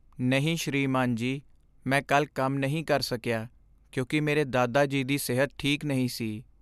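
No technical faults are audible anywhere in this speech recording.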